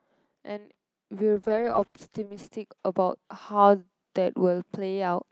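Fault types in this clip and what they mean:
Automatic gain rising: the automatic gain control judged the input too quiet and kept raising its gain, so from 0.45 s to 5.24 s the speech and the background noise swell together by about 7 dB, as a slow climb rather than a sudden step.
Call bitrate drop: the call's bandwidth estimate fell and the Opus encoder dropped from 40 kbps to 9 kbps, holding the lowest rate for about 1.1 s. Between 1.39 s and 2.83 s the speech turns coarse, watery and muffled, losing its top end.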